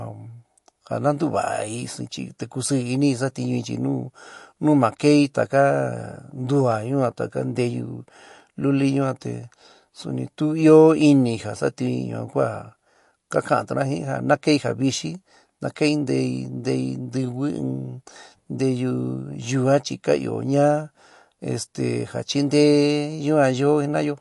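From start to finish the speech carries a watery, swirling texture. Nothing is present above about 11.3 kHz, so sibilants lose their top edge, and consonant attacks sound smeared. This is plainly audible damage from likely MP3 compression at a low rate, consistent with roughly 48 kbps. Unlike a simple low-pass filter, the weak spectral detail flickers in and out between frames, producing chirpy, bubbling artefacts rather than a clean, steady dullness.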